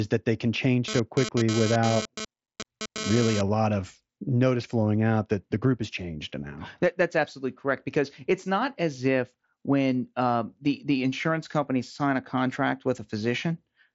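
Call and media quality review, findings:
Hard, raspy buzz with dense harmonics, 0.88–3.41 s, between "that they can change" and "lot of notice flowing"; comes and goes, about 6 dB below speech. GSM phone buzz: nearby 2G handset transferring data, 217 Hz transmit bursts rectified in audio circuitry.

Bluetooth mSBC headset path: band ends near 7.7 kHz, light codec grain on loud passages.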